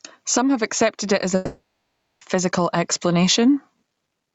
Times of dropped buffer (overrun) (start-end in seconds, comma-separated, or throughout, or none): none